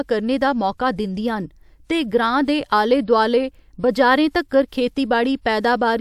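No dropouts, clicks, distortion or level jumps turn up anywhere in the speech, and no technical faults are audible.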